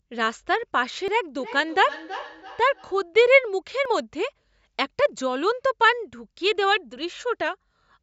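At 1.08 s the speech jumps forward, with no gap of silence. That's most likely a dropped buffer (overrun): the software didn't pick up its samples before the hardware wrote over them, so roughly a hundredth of a second vanished and the edges got butted together. It happens again at 3.85 s, where the skip is bigger, a few hundredths of a second.

Between those two, from 1.39 s to 3.07 s, there's feedback echo between two devices. Two devices on the same call are in one room, so one device's speaker replays what the other's microphone sent, and that microphone picks it up again. The echo canceller on each device only removes its own playback, so the loop gets through. You hear each word come back about a third of a second later, thin and ringy, peaking at about 14 dB below the speech.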